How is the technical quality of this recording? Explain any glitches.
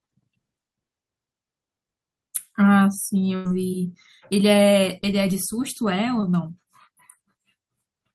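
The speech has two dropouts from network packet loss on a call line, and the top end stops at about 12 kHz as the call codec limits it.

A burst of packet loss runs from 3.35 to 3.47 s. A run of consecutive packets, about 100 ms of audio, arrived too late or not at all, so the receiver extended the last sound for about 95 ms while lowering its level. You hear a held buzz or fading hiss in place of real speech, then the talk picks up further along with that stretch gone.

A short concealed packet loss occurs between 6.21 and 6.24 s. Roughly 20 ms never reached the decoder in time, and the receiver patched the hole by continuing the preceding sound, pitched if voiced and as shaped noise if not, for about 14 ms before blending back into the real signal. It comes across as a quick smear or wobble, and a brief consonant there can disappear.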